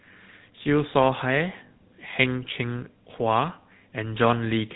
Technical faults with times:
0.00-4.76 GSM full-rate codec

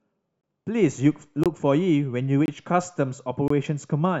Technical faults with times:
0.41-0.43 gap between chunks
1.43-1.46 gap between chunks
2.46-2.48 gap between chunks
3.48-3.50 gap between chunks

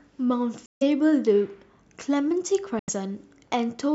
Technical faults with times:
0.66-0.83 Bluetooth dropout
2.79-2.90 Bluetooth dropout

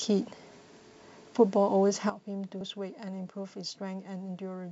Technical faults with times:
2.10-4.71 sudden gain jump
2.57-2.61 damaged data in a compressed stream

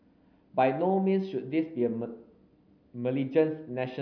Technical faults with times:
none

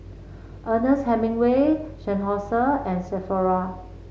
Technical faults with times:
none

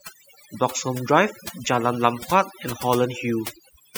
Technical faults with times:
0.00-3.98 overdone noise removal

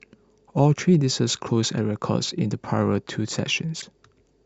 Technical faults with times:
3.78-3.83 damaged data in a compressed stream

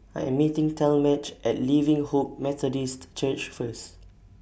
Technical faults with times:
none

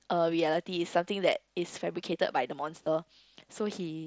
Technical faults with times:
0.47 concealed Bluetooth headset packet loss
2.84-2.86 concealed Bluetooth headset packet loss

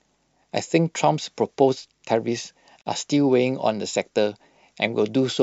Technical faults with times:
2.81-2.86 gap at a join of encoded pieces

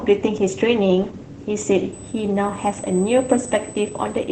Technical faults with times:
0.00-4.32 Opus voice compression
1.93-4.32 USB whine

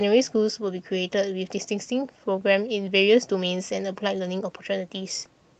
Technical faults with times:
none

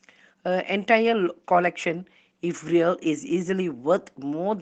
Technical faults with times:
none

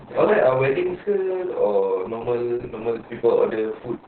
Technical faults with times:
0.00-4.07 Opus voice compression

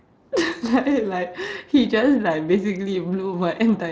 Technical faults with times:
none

